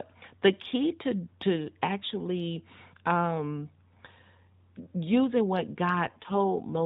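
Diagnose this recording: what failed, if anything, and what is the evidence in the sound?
An AMR rate drop, ordered by the network and applied in the codec. From 6.05 s to the end, the speech turns rougher and more synthetic. The band below 4 kHz stays the same, with no gap. This fits a cut from 12.2 to 5.9 kbit/s.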